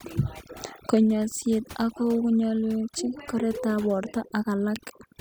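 Overdone noise removal runs throughout: noise reduction set too hard strips bands near the noise floor, leaving twinkling near-silence behind the speech.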